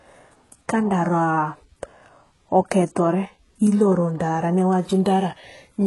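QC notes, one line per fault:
Throughout, HE-AAC compression: the treble is synthetic and stops dead above 11.5 kHz, with s sounds coming out gritty and metallic. It's likely low-rate HE-AAC copying lower bands upward to fake the top end, and the heavy damage points to a rate around 12 kbps.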